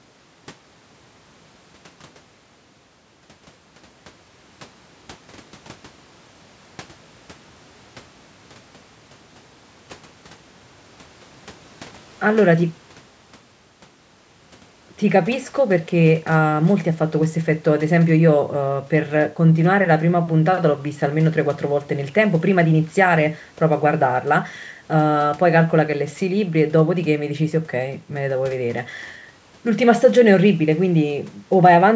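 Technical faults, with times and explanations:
No technical faults are audible in this speech; the call microphone processing trims the lowest bass and passes nothing above 8 kHz, as that path normally does.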